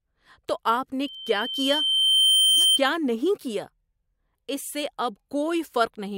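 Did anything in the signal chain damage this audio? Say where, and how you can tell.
Yes. At the acoustic loop between loudspeaker and microphone, a loudspeaker feedback squeal rises after "تو آپ" at 1.03 s. It is a single 3.1 kHz tone that swells over about one and a half seconds to about 5 dB above the speech, then stops at 2.80 s before "نہیں کیا". That self-building growth separates it from a steady electrical whine.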